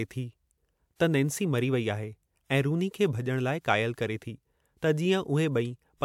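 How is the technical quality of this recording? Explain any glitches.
No glitches or faults are audible.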